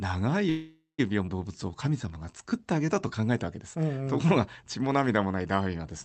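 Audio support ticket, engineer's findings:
Call audio freeze, 0.49–1.00 s: last sound held as a fading buzz into about 150 ms of silence, then resumes where it stopped, nothing lost. Spectrogram shows smeared frozen harmonics decaying to a blank band. Likely packets held up, jitter buffer ran empty; adds 0.49 s delay.

Skip ahead, 1.26–1.29 s: playback jumps forward with only a 10 ms fill, roughly 0.2 s of audio gone. Waveform shows an abrupt splice and a discontinuity in the spectrogram's formant tracks. A stretch was dropped, cutting delay by about 0.2 s.

Jitter buffer slow-down, 1.52–3.22 s: audio runs at 86% speed with unchanged pitch, sounds drawn out. Waveform shows repeated identical pitch periods; spectrogram features stretched horizontally. Jitter buffer added 239 ms to rebuild reserve. Opus call path band-limited near 8 kHz.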